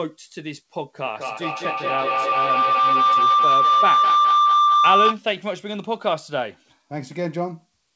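From 1.05 s to 5.25 s a feedback howl takes over the speech. Two devices in the same room are on the call, so the sound leaves one loudspeaker, gets picked up again, and comes back louder each time around. It narrows to a tone near 1 kHz, pulsing roughly every fifth of a second, and peaks about 6 dB above the speech before the loop breaks. The whole clip tops out around 8 kHz, as you'd expect from a wideband call codec.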